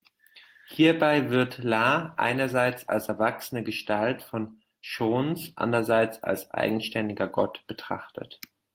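No technical faults can be heard anywhere in the recording.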